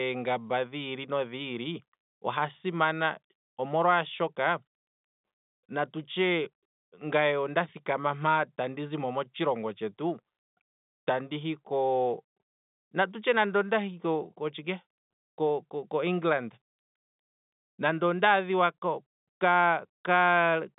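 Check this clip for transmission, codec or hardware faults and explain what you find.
No faults found.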